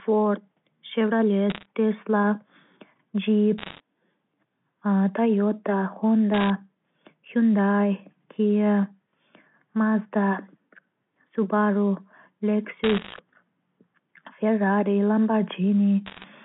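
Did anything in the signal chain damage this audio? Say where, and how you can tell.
Yes. Bit errors on a digital phone line damaged the transmission stage, heard as crackle bursts at 1.5–1.66 s, 3.58–3.8 s, 6.34–6.5 s, 12.84–13.19 s and 16.06–16.24 s. At a few percent, flipped bits each corrupt one mu-law sample. Sign or high-bit hits give sharp ticks over intact speech.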